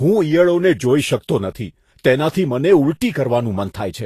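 The whole speech clip has a grainy, hissy top end, with nothing above 14.2 kHz, likely Vorbis compression at a low bitrate, maybe around 34 kbps, turning fine treble detail into noise.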